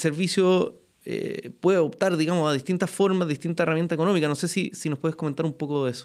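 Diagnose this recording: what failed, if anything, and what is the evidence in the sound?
Listening through this speech recording, nothing stood out that would point to a failure at any stage of the chain.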